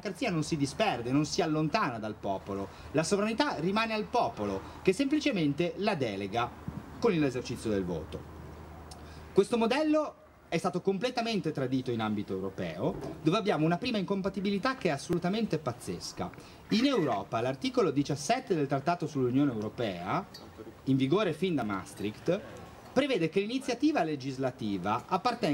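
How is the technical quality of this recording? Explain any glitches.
The recording has three small glitches. At 7.34, 15.13 and 21.62 s, the sound jumps ahead. Each is likely a dropped buffer (overrun), where roughly 10 ms was lost and the two sides were joined directly.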